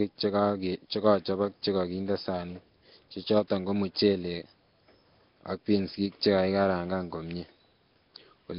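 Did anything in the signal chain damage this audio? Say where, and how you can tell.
Yes. Nellymoser compression, present throughout: the speech carries a rough, hissy halo and a smeared, underwater quality, with nothing above 5.3 kHz. This points to the codec stage, likely Nellymoser Asao at heavy settings, around 22 kbps, where starved bands are replaced with noise.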